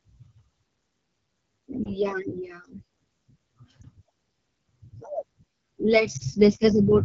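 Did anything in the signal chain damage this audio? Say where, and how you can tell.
Yes, the damage comes from two stages. At the codec stage, the whole clip carries AMR wideband (HD Voice) codec damage that is plainly audible. The speech sounds rough and raspy, which fits one of the lowest modes, around 8.85 kbit/s. At that rate the pulse-driven vocal tract model has too few bits to follow the fine detail. On a spectrogram, harmonics look smeared below 6.4 kHz, and the 6.4 to 7 kHz band shows only uniform, noise-like texture with no harmonic structure.

At the network or radio stage, there are three lost AMR speech frames, at 1.84–1.89 s, 3.81–3.84 s and 6.17–6.23 s. Each is a brief dip or warble, which fits a single 20 ms frame failing its checksum. The decoder covered each gap by repeating the previous pitch and vocal tract settings at reduced gain. On the waveform, each one shows as a short amplitude sag. 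On a spectrogram, the harmonics stay frozen and fade slightly for those few tens of milliseconds.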